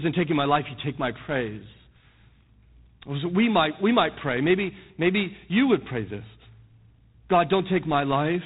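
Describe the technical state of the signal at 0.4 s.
At 0.4 s the signal is still running through G.726 ADPCM, which affects the whole clip. Each sample carries only a few bits describing how it differs from an adaptive prediction, a coarseness that fits 24 kbit/s. The result is a plainly audible rasping hiss that follows the speech level, and nothing passes above 3.9 kHz.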